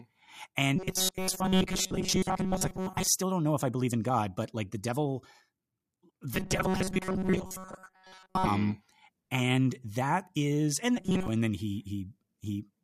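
From 0.76 to 3.08 s, 6.35 to 8.47 s and briefly 10.97 to 11.28 s, the speech collapses into robotic sound from repeated short buffers, a rigid metallic buzz pinned at 188 Hz that only loosely tracks the syllables. The likely cause is audio arriving too seldom, with a span of about 5.3 ms looped for most of each stretch. Unlike a pitch-shift fault, the buzz stays fixed regardless of the speaker's intonation.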